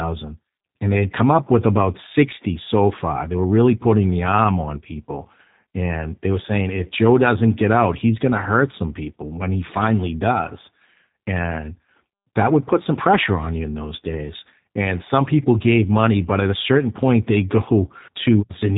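From start to finish, the speech carries G.729 codec damage, which fits an 8 kbit/s G.729A stream. The codec rebuilds each 10 ms frame from a vocal tract model, a pitch predictor and sparse pulses. Nothing passes above 3.8 kHz. The speech sounds plainly rough and synthetic.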